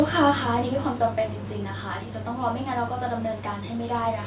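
Automatic gain falling is the fault in this speech clip: the automatic gain control found the input too loud or its background noise too strong and pulled its gain down, by about 6 dB between 0.05 and 2.09 s. The speech starts out loud and then sinks, with the background noise dropping along with it. The sound is band-limited to 4 kHz, which points to the G.711 mu-law codec of a call path.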